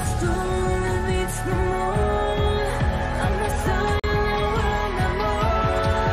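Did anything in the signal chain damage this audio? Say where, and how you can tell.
Yes. At 4.00 to 4.04 s, playback has a gap between stream segments. Timestamps at the 4-second segment join leave 41 ms, filled with hard-edged silence.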